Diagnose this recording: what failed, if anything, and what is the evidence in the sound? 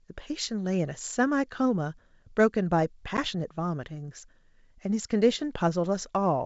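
Packet loss on an ADPCM call at 3.17–3.19 s (network): about one 10 ms packet drops to hard silence, then speech returns disturbed while the decoder's predictor and step size resynchronise.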